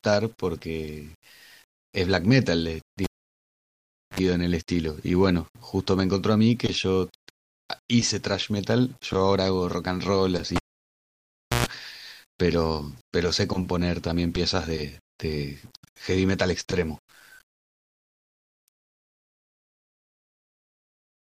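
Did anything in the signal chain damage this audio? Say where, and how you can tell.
Yes. The speech carries low bit depth without dither from start to finish. Quiet passages sound grainy and rough, and the grit rises and falls with the level of the voice. Soft tails break up rather than fading smoothly. The error sits roughly 35 dB below the signal, which fits about 9 bits with plain rounding. The likely stage is a sample-format conversion that reduced word length without adding dither, so the rounding error tracks the waveform.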